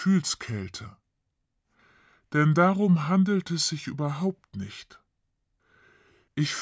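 Speech with a wrong sample rate throughout: everything runs at 0.726 speed and about 5.55 semitones low, which fits 22 kHz audio played back at 16 kHz.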